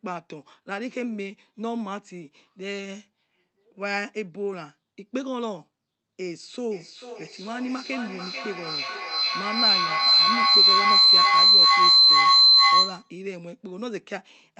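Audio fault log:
6.71–13.24 s, feedback howl: two devices in the same room are feeding each other, and each trip from loudspeaker back into the microphone comes back louder. The repeats narrow down to a shrill tone around 4 kHz, with a loop delay of roughly 400 ms, and climb to about 14 dB above the speech before the loop breaks. The call codec's top end stops near 8 kHz, so the howl sits well inside the band.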